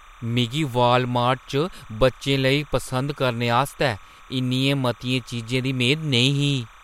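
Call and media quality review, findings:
Timecode bleed throughout: steady chirpy warble behind the speech, roughly 1 and 2 kHz, some 25 dB down. Fits 30 fps LTC leaking in from an adjacent track or cable.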